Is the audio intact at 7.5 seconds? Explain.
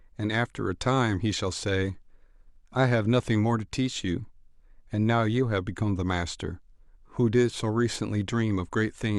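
Yes, the speech at 7.5 seconds is intact, with no dropout, click, distortion or other fault audible at that moment.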